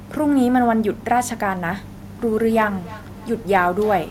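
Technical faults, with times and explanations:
2.39–4.11 s, feedback echo between two devices: from here to the end, the speech returns as a delayed copy roughly every 300 ms, peaking at about 19 dB below the direct speech. Two devices in the same room share the call. One plays back what the other's microphone sent, and that microphone picks it up again. Each device's echo canceller only removes its own playback, so the loop survives and returns thinner and more ringing.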